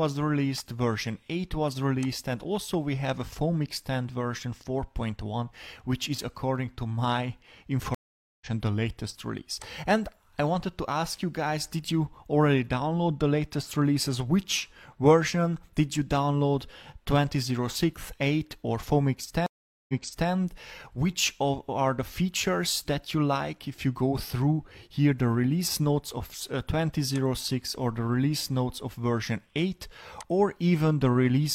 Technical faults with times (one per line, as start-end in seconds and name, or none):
7.94-8.46 stream reconnect
19.46-20.30 stream reconnect